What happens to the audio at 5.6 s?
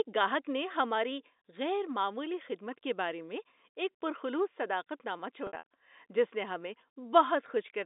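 Packet loss with pitch repetition runs from 5.47 to 5.63 s, after "پر خلوص صداقت نامہ". About 110 ms drops out. Repeated pitch periods bridge the gaps, giving a held, buzzy sound.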